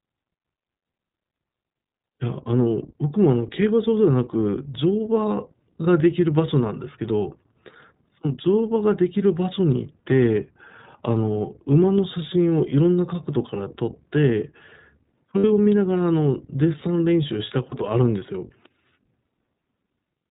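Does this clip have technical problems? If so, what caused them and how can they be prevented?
Yes. The whole clip has been through the iLBC codec. The speech is band-limited to the narrowband telephone range, so a spectrogram shows a hard ceiling with nothing above 4 kHz. The plainly audible roughness and slightly synthetic texture come from each frame's excitation being coded on its own at a low bit rate, which fits iLBC's 20 ms mode at about 15 kbps. Prevent it by negotiating a wideband codec such as Opus for the call.

There are lost iLBC frames at 15.38 to 15.46 s, a gap of about 60 ms, and at 17.70 to 17.74 s, a single missing frame of about 20 ms. In each gap the decoder concealed the loss by repeating the last pitch cycle mixed with noise, so the sound becomes a brief held, buzzy vowel. On a waveform this appears as a short run of near-identical periodic cycles. On a spectrogram it shows as frozen horizontal harmonic bands with a smeared noise floor. 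Because iLBC frames are independent, normal speech returns right after each gap. Prevent this with a larger jitter buffer, forward error correction or redundant packets, and a less congested network path.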